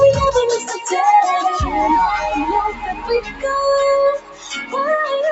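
From start to finish the level keeps pumping and fluttering, with sustained parts sinking and recovering across a swing of around 10 dB while sharp onsets mostly push through. This is a noise suppressor built for speech left running on music or other sounds. It reads steady tones, ambience and decaying tails as background noise and keeps pulling them down, so held material thins out and breathes against the louder attacks. The top end stops at about 8 kHz throughout, as the call path carries nothing higher.

Three passages sink clearly below their surroundings. The first runs from 0.59 to 0.92 s and drops by about 9 dB. The second, from 2.72 to 3.44 s, drops by about 8 dB. The deepest is from 4.18 to 4.75 s, where the sound falls by about 16 dB. Each is a case of sound cut by the noise suppressor: the suppressor judged these stretches to be noise and turned them down harder than the rest, starving the steady and fading parts.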